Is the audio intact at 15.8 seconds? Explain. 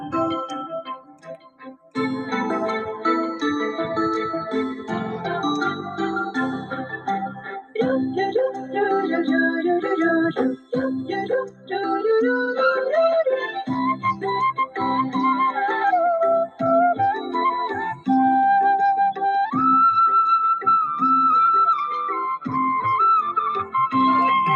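No. At 15.8 seconds the noise suppressor applied to music or sounds is at work, as it is across the whole clip. Processing built for speech treats sustained tones, ambience and decay as noise, so held sound and tails are pulled down while attacks pass through. The gain keeps shifting by roughly 5 dB, and at this moment the sound pumps and thins, with sustained parts sinking after each onset.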